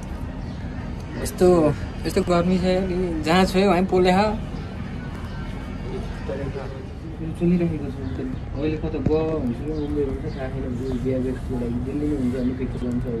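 Chunks out of order occur at 2.14 to 2.28 s, 5.16 to 5.25 s and 12.73 to 12.82 s. A 46 ms block plays one or two places late. Nothing is lost. Three hard joins give each moment a brief jumbled stutter.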